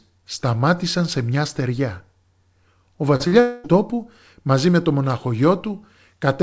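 At 3.16 to 3.23 s and again at 3.28 to 3.35 s, about 40 ms of the call failed to reach the decoder in time. Each time the receiver covered the gap by stretching the last stretch of speech forward and then crossfading back into the real signal. This is short concealed packet loss. Each event is a brief smear or wobble lasting a few hundredths of a second, and the two sit close enough together that the speech seems to stumble twice in quick succession.

From 3.40 to 3.67 s, roughly a quarter of a second of audio was lost, likely as a long network dropout. The receiver filled the whole hole with synthesised continuation rather than silence. That comes through as a held buzzy or hissy tail that fades and takes the place of the real speech. The speech resumes at "τόπου μαζί με το" with the missing portion gone. Across all of this, the G.722 call path's ceiling at 8 kHz leaves nothing audible above that frequency.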